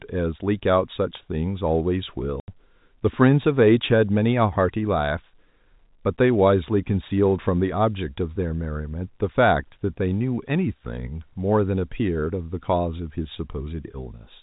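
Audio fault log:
2.40–2.48 s, packet loss filled with silence: the speech cuts out for 80 ms, a gap that fits four 20 ms packets going missing. The receiver inserts pure silence there, so the hole starts and stops abruptly against the narrowband telephone sound.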